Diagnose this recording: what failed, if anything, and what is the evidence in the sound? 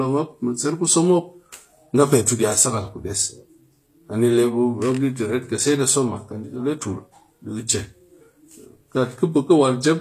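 HE-AAC compression, throughout, at the codec stage: the speech's treble sounds bright but synthetic, with gritty, lispy s sounds and nothing above 14.9 kHz. Spectral band replication likely copied lower bands upward, misaligning harmonics, which fits a bitrate near 24 kbps.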